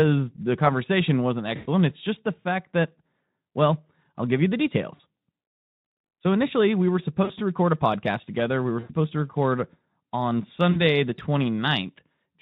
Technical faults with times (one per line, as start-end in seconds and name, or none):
1.55-1.68 VoIP packet loss concealed by the speech codec
4.96-5.00 VoIP packet loss concealed by the speech codec
7.23-7.32 VoIP packet loss concealed by the speech codec
8.79-8.93 VoIP packet loss concealed by the speech codec
10.71-10.82 VoIP packet loss concealed by the speech codec